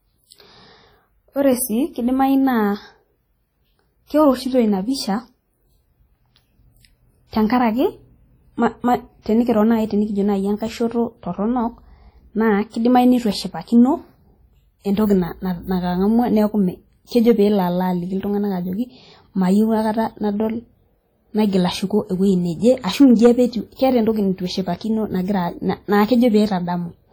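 Across the whole speech clip the artefacts of heavy compression remain, yet the top of the spectrum runs to about 20.1 kHz, as a high-bitrate MP3 would. This combination points to low-bitrate audio saved at a high bitrate: a very lean encode, likely around 32 kbit/s WMA, was converted into a 256 kbit/s MP3. The larger file keeps every loss and artefact of that first pass and adds almost nothing of its own.

From 17.17 to 17.31 s a short burst of crackle cuts through the peaks, and from 22.67 to 23.31 s a longer stretch turns harsh and fuzzy on the loudest moments. Both are hard clipping. The signal exceeded what a stage in the chain could pass, by about 3 dB in the first event and about 5 dB in the second, so the waveform peaks were sliced flat. Those flat tops generate high harmonics, which is why the second, deeper overload sounds rougher.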